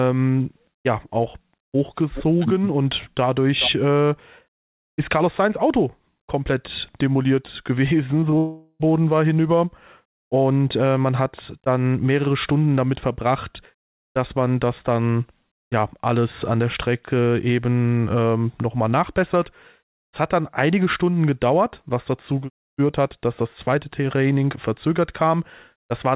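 Right after "komplett demoliert", two short concealed packet losses occur, at 8.20 to 8.24 s and again at 8.30 to 8.34 s. Each time about 20 ms of audio failed to arrive, and the receiver bridged the gap by extending the preceding sound before blending back into the real signal. Each is heard as a brief smear or wobble in the speech. The narrow band, with nothing above 4 kHz, fits a G.711 mu-law call path.

From 8.38 to 8.82 s, just before "war hinüber", the speech is replaced by a synthetic continuation of the last sound that fades over roughly 0.4 s, followed by about 20 ms of silence before normal audio resumes. This is likely a long network dropout. About 420 ms of the original speech is gone, and playback picks up after the gap without it.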